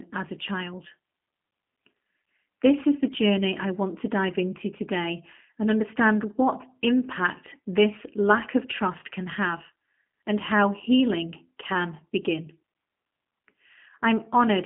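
Speech squeezed through a G.729 codec all the way through, with nothing above 3.6 kHz, a 200 Hz to 3.5 kHz phone band, and a plainly rough, synthetic edge that fits 8 kbit/s.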